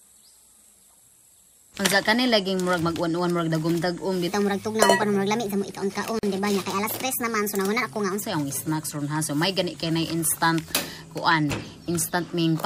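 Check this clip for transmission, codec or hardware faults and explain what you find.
Two faults are present, one overlapping the other.

Section at the wrong speed, 4.28 to 8.22 s: likely played against the wrong clock, running 1.26 times fast, so the sound turns hurried and about four semitones higher.

Gap at a join of encoded pieces, 6.19 to 6.23 s: separately encoded pieces joined untrimmed leave a 42 ms gap with smeared edges before the sound resumes.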